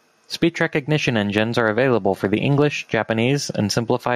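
Throughout the speech the level pumps, swinging by around 10 dB, so quiet and loud passages sit unnaturally close together and the sound comes across squashed. This is gain pumping, likely from the input gain being set far too high and a fast limiter or compressor clamping down on each loud moment, then releasing in the gaps.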